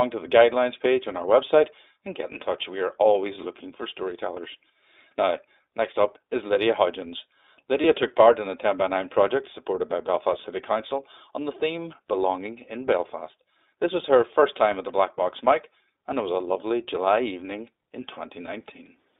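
Throughout, the speech sounds thin, slightly rough and synthetic, with nothing above about 3.7 kHz or below 250 Hz. This is the iLBC codec, coding each 20 ms frame independently, consistent with its 15.2 kbps mode. From 7.82 to 7.86 s and again from 18.46 to 18.50 s, the sound briefly turns into a short, buzzy held tone before snapping back. These are lost iLBC frames, one 20 ms frame each, filled in by repeating the last pitch cycle mixed with noise.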